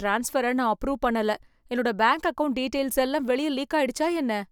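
No faults to report in this speech recording.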